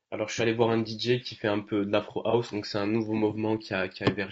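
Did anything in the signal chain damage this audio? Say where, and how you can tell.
Yes. At the codec stage, the speech sounds rough and grainy throughout, with noise between harmonics, plainly audible damage likely from low-delay AAC compression at around 32 kbps.

At the network stage, AAC frame loss with concealment at 0.35–0.40 s and 2.30–2.34 s: the decoder refilled each gap from the prior spectrum, leaving brief smeared, noisy patches.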